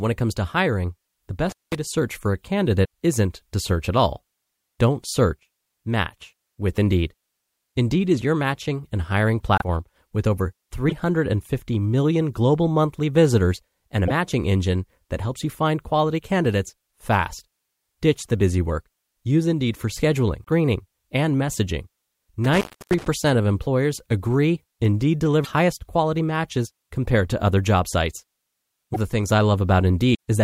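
At 1.49 to 1.75 s the speech drops out for about 0.2 s, crackling at both edges with faint hiss in the gap. This is an intermittent contact, a loose plug or cable briefly opening the signal line.

At 9.58 to 9.62 s, between "your matching and hiring" and "with over", the audio jumps ahead, and the same happens at 20.44 to 20.48 s after "for scheduling" and at 30.13 to 30.15 s. These are likely a broken MP3 bit reservoir: frames of about 26 ms went missing, so the following frame looked back for its data and found bytes of another frame.

At 22.44 to 23.08 s, after "and messaging" and before "of employers agree", a second intermittent contact cuts the sound for about 0.3 s, again with crackle at its edges.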